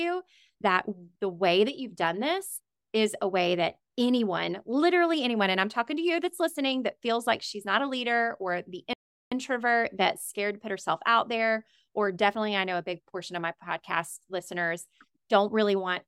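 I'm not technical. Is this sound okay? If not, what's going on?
No. At 8.93 seconds, just after "a leader or the", the speech cuts out into complete silence for about 0.38 seconds, until 9.32 seconds, and then carries on. This is a playback stall. The likely cause is that the player briefly ran short of audio data, or was held up doing something else, so it had nothing to send to the speakers and fell silent until it caught up.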